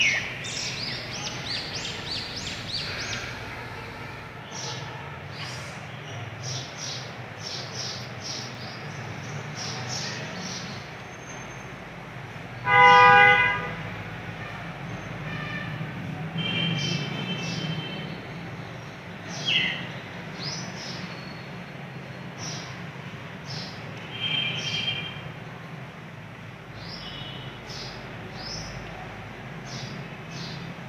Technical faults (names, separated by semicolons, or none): block of digital silence